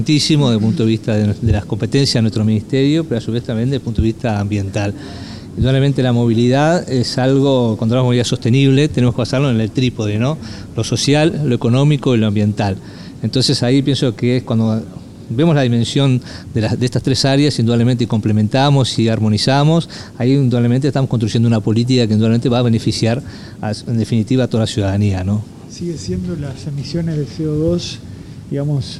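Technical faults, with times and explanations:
Nothing here calls for attention, as the clip runs along without any technical problems worth noting.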